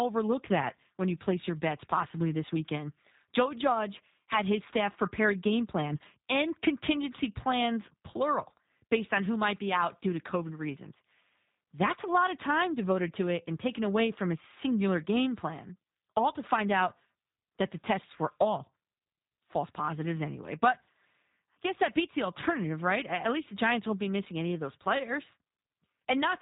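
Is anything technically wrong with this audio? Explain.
Yes. For the whole clip, the speech carries the marks of the G.729 codec, a low-rate VoIP coder that rebuilds each 10 ms frame from a vocal tract filter, a pitch predictor and a few sparse pulses. Nothing reaches above 3.8 kHz, and the speech sounds plainly rough and slightly synthetic, with a buzzy grain, a coding rate that fits 8 kbit/s. A plain telephone-band filter would dull the top end but leave the remaining sound smooth; this roughness shows the signal has been coded, not just filtered.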